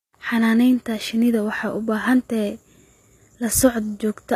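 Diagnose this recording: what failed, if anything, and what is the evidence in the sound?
The fault sits at the codec stage and runs through the whole clip. The speech carries plainly audible coding damage. The treble above the mid band sounds bright but synthetic, and nothing is present above about 14.9 kHz. The likely cause is HE-AAC compression at a low rate, fitting roughly 24 kbps. The core codes only the lower spectrum. Spectral band replication then copies those bands upward under a coarse envelope, so the rebuilt highs do not match the original harmonics.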